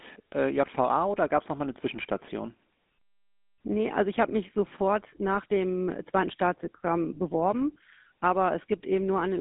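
Throughout, GSM full-rate codec coding: pulse-excited vocal-tract modelling leaves a buzzy, gravelly roughness, and nothing above 3.8 kHz, consistent with 13 kbps telephone coding.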